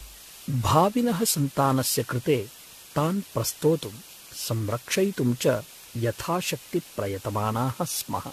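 Low bit depth with dither runs through the whole speech clip: rounding to 7 bits, with dither, leaves a steady, even hiss about 20 dB below the signal, without distortion. Generation loss is also present throughout. The sound is swirly, hollow and smeared, with blurred attacks and nothing above 14 kHz, likely from around seven lossy re-encodings, which fits AAC at 64 kbit/s.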